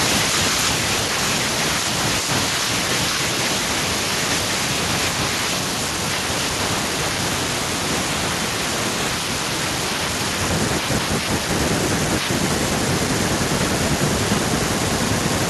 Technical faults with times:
0.05-1.18 automatic gain falling

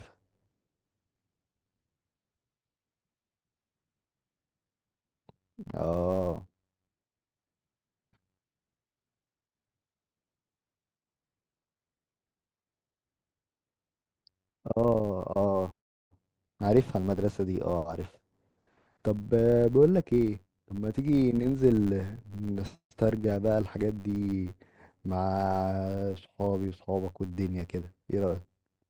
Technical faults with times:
0.00-28.89 filter restarted on every block
0.00-20.23 channel delay (comb filtering)

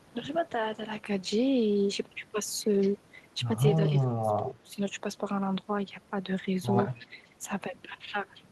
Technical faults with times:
2.81-2.91 echo leak
3.78-4.82 speech suppressed in double talk
6.91-7.30 echo leak
7.07-7.14 speech suppressed in double talk

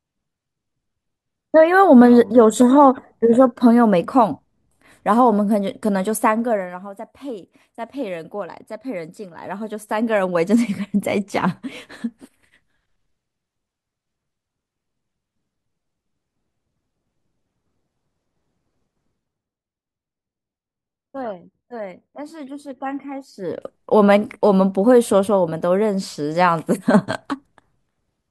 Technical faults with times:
1.94-5.83 sample clock jitter
6.10-6.91 zipper noise
23.21-23.77 zipper noise

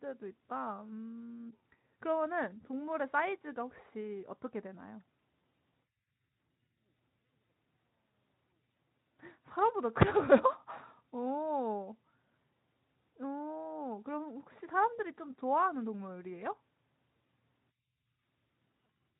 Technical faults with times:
none

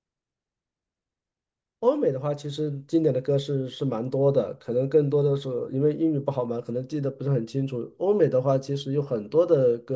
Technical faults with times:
none

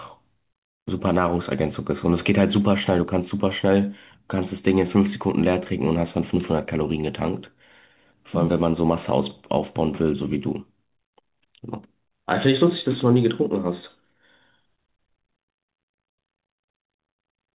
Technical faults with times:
none

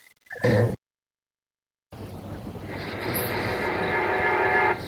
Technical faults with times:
2.85-4.87 feedback echo between two devices

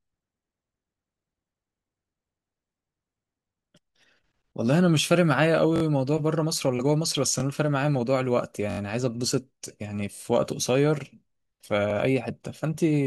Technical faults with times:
5.76-5.82 repeated buffer
7.40-7.42 repeated buffer
8.70-8.79 repeated buffer
10.15-10.20 repeated buffer
11.90-11.93 repeated buffer

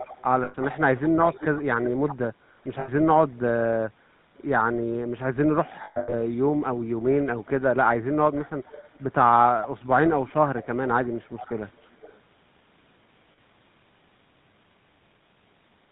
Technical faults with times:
0.00-15.92 GSM full-rate codec
0.00-0.22 echo leak
0.44-0.55 lost GSM frames
0.66-1.46 echo leak
1.84-2.16 echo leak
2.80-2.90 lost GSM frames
5.84-6.14 lost GSM frames
7.23-7.50 echo leak
10.27-10.67 echo leak
11.05-12.20 echo leak
13.32-13.39 lost GSM frames

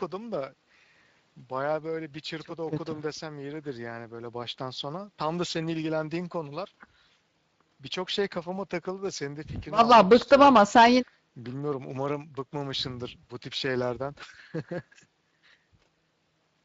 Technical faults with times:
0.00-16.64 Speex codec

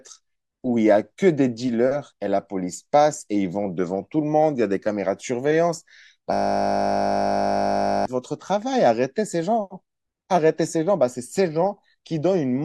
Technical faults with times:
6.33-8.05 system hang loop

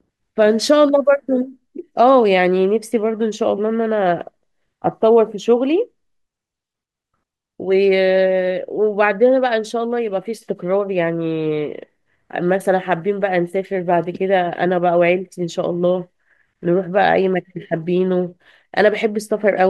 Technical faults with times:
none

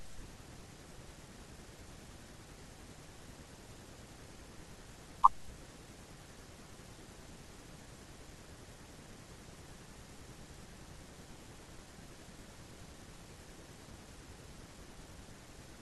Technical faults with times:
none

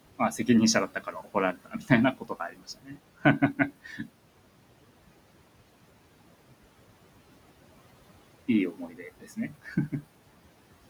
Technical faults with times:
0.00-10.89 noise suppressor artifacts
0.88-2.97 speech cut by the noise suppressor
3.84-4.06 speech cut by the noise suppressor
8.72-10.02 speech cut by the noise suppressor

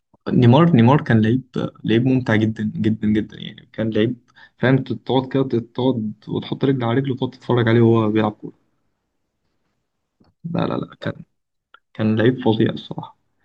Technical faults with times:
none

